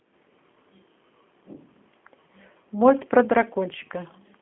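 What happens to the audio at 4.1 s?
At 4.1 s the speech carries G.729 codec damage, as it does through the whole clip. The codec rebuilds the voice from a vocal tract model and a few pulses, which fits an 8 kbit/s stream. Nothing above 3.4 kHz survives. The sound is muffled, rough and plainly synthetic.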